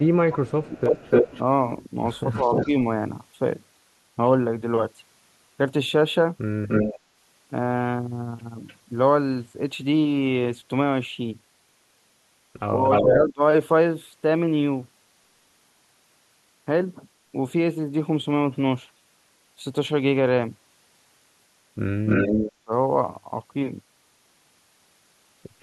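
Echo leak runs from 0.0 to 2.67 s, again at 6.68 to 8.76 s, 12.83 to 13.16 s and 22.06 to 22.52 s. A copy of the speech returns 297 ms late, about as loud as the original. The likely cause is a far-end loudspeaker whose echo canceller let its microphone pickup through.

Speech suppressed in double talk overlaps the echo at 0.06 to 2.73 s and 13.01 to 13.42 s, and follows it at 22.64 to 22.71 s. The speech dips in short pieces, by up to roughly 25 dB. The canceller likely mistook the talker for echo and turned both down.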